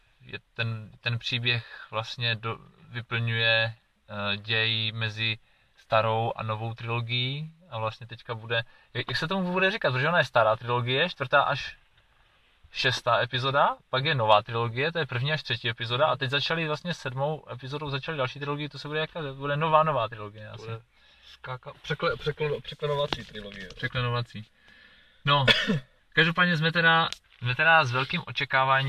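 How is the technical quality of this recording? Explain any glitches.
No technical faults are audible.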